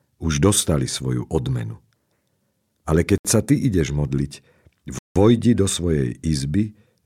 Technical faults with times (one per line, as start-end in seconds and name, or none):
3.18-3.25 Bluetooth stall
4.99-5.16 Bluetooth stall